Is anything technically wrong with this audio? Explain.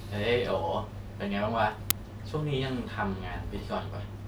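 Yes. At 1.90 s in this speech clip there is an uninitialised buffer. A block was played before any audio was written into it. Leftover memory came out as samples. The result is a loud crack, about 5 ms long, which fits a 256-sample buffer.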